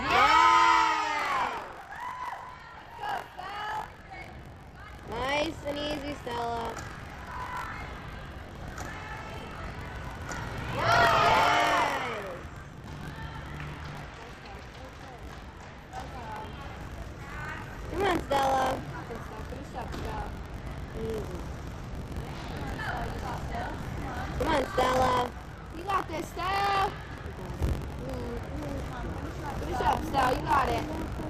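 From 1.17 s to the end of the clip there is buffer tearing: the writing process and the playback hardware have drifted out of step and cross inside every period. About a tenth of each buffer carries audio roughly 40 ms stale, joined with hard edges on both sides. The result is a continuous robotic buzz at 46.9 Hz, which fits a 1024-sample buffer, present wherever there is signal.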